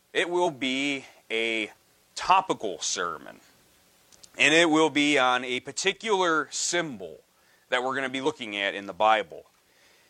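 At 0.42 to 0.48 s and again at 8.22 to 8.27 s, the sound breaks into a brief chirp, squawk, click or short hole about 50 to 60 ms long. Both blips are damaged data in a compressed stream: a stretch of the encoded bytes was lost or overwritten, so the decoder misread or dropped those frames, lost sync, and had to hunt for the next valid frame header before output resumed.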